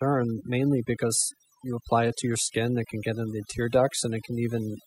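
From start to finish the speech carries overdone noise removal. A noise reducer set far too aggressively is attenuating individual frequency bands, sometimes to nothing, whenever their level sits close to its noise estimate. Low-level parts of the speech fall under that threshold and are cut along with the noise. Between phrases the background collapses to near silence dotted with sparkling, chirpy specks.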